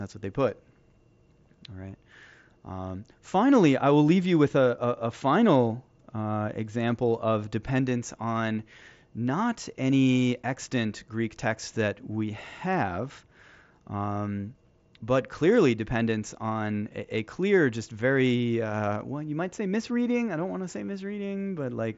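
Nothing in this speech recording stood out as a problem on listening.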